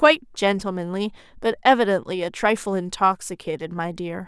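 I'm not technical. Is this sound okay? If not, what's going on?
Yes, this sound is okay, and there's nothing going on that needs fixing.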